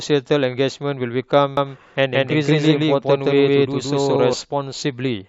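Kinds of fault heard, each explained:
Doubled audio track: a full-band copy trails by about 150 ms at near-equal level, cutting in and out abruptly, likely from a duplicated capture path.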